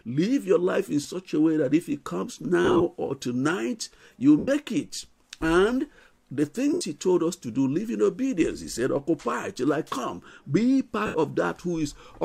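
Lost LE Audio frames break up the audio at 1.03–1.05 s, 2.64–2.81 s, 4.38–4.48 s, 6.73–6.81 s and 11.06–11.15 s. The LC3 decoder fills each gap by replaying the last spectrum with random signs, smearing tones into noise that fades over the longer gaps. The 2.64 s break is scattered, with runs up to about 40 ms.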